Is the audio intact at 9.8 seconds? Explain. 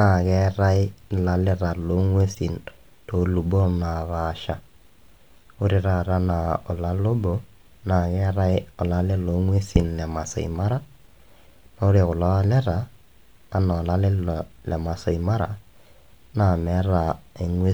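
No, there's a corrupt frame decoded at 9.76 s, right after "naa keetai olale le". A couple of damaged frames play anyway, giving a brief blip.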